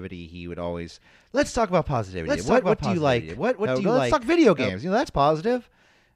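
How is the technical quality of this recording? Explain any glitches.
Quality is marred by one clear fault. From 2.25 s to 4.69 s, just after "always let's talk about", a doubled audio track appears: a second copy of the speech runs about a second behind, roughly 5 dB quieter, full-band and dry. It is likely a second capture through a slower path, or an edit holding two copies out of step. On a spectrogram the harmonic pattern repeats, shifted right by about a second, and the waveform shows overlapping envelopes that begin and end with abrupt edges.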